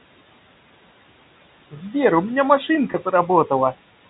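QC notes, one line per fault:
Throughout, noise suppressor artifacts: the room noise is lowered by about 18 dB in the pauses and rises again under the speech. This happens because each band is gated frame by frame. On a spectrogram the noise floor looks blotchy, dropping away between phrases.
2.92 to 2.94 s, packet loss with pitch repetition: about 20 ms goes missing, which fits a single lost packet. The receiver fills it by repeating the last pitch period, giving a brief held buzz. The waveform shows repeated cycles, and the spectrogram shows frozen harmonics there.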